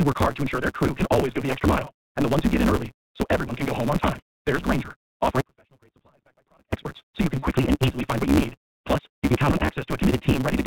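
A steady buzz at about 138 Hz runs under the whole speech recording, and everything moves about 1.6 times too fast while the timbre stays. That is a block size mismatch (truncated): one stage writes longer blocks than the next reads, and the tail of each block is discarded. The missing pieces make the sound run fast, and the regular cut points make the buzz, which fits a 512-sample written block. The whole clip is also muffled, with nothing above 4 kHz, and has a rough, slightly synthetic edge. This is plainly audible iLBC codec damage, narrowband VoIP coding that points to the 15.2 kbps mode with 20 ms frames. Short held, buzzy smears appear at 1.85 to 1.88 s, 7.39 to 7.44 s and 9.66 to 9.69 s, covering about 20, 60 and 40 ms of audio. These are lost iLBC frames: the decoder filled each gap by repeating the last pitch cycle mixed with noise. Because each frame decodes independently, the sound snaps back almost at once afterwards. 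From 5.41 to 6.73 s the signal cuts out abruptly and then returns just as suddenly. Only a faint residue about 35 dB below normal level remains in the gap, which rules out a natural pause or a fade. This is an audio dropout to a faint residue, likely caused by the wanted signal being lost upstream while the path after the break stayed live.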